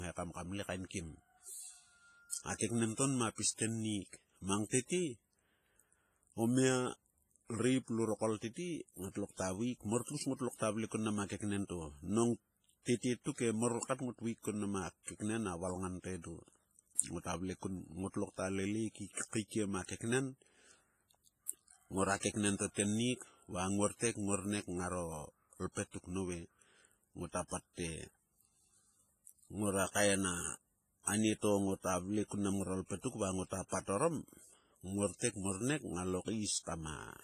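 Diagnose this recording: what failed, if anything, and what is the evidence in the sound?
The codec stage is at fault, and the damage is likely from WMA compression, heavy enough to fit a low bitrate around 24 kbps. It runs through the whole speech clip: a ringing, washy smear around each syllable, a hiss that swells and fades with the level, and nothing above 15.4 kHz. Long transform blocks spread quantisation noise over tens of milliseconds and zero out weak spectral lines. Because the damage is continuous, with no gaps or repeats, this is not network packet loss.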